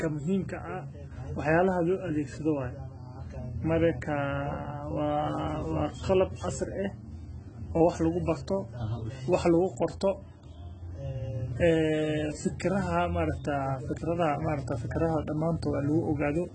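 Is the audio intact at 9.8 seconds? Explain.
No. At 9.8 s, as throughout, the speech has likely passed through heavy AAC compression at a bitrate as low as 16 kbps. The encoder removes everything above 10.3 kHz and coarsely quantises the rest, so the speech sounds dull and smeared, with fizzy, warbling sibilants.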